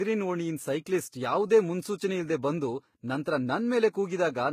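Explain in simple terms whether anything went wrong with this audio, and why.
Something went wrong across the whole clip. The speech carries two sets of compression damage heard at once, and nothing sounds above 14.9 kHz. This is likely transcoding between lossy codecs. The audio was squeezed by one compressed format, then squeezed again by another.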